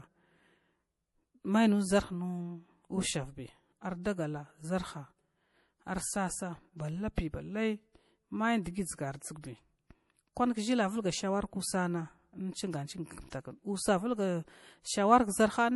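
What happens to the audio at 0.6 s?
At 0.6 s the speech carries the same damage heard throughout: likely MP3 compression at a low bitrate, consistent with about 48 kbps. The starved encoder drops everything above 11.5 kHz and lets weak frequency lines flicker between frames, so the sound turns dull and watery, with swirly, chirpy sibilants.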